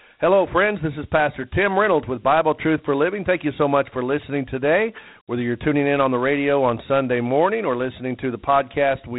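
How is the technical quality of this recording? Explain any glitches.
Technical quality is limited: the whole clip carries Dialogic VOX ADPCM coding, and the damage is plainly audible. The speech is squeezed into a telephone-style band with nothing above 3.9 kHz, and a gritty, granular hiss rides along with every syllable. The cause is the 4-bit adaptive step quantiser, whose rounding errors scale with the signal level, a coarseness that fits a 32 kbps OKI stream. On a spectrogram the energy stops sharply at 3.9 kHz, and the noise floor rises and falls with the speech.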